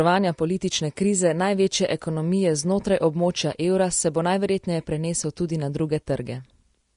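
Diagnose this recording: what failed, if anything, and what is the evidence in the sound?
Across the whole speech, the treble is hissy and grainy, sibilants smear into a noisy wash, consonant attacks are blurred, and nothing survives above 10.6 kHz. The stage is the codec, most likely Vorbis compression at a low setting, around 38 kbps by the sound of it. The encoder lowered the cut-off and coded the upper band so coarsely that fine detail was replaced by noise of matching energy, leaving this roughened, hashy top end.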